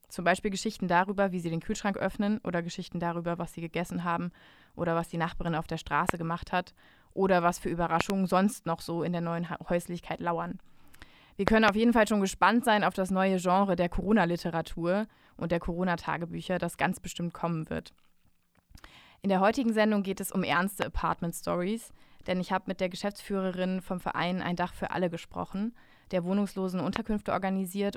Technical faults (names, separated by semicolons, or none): loud pop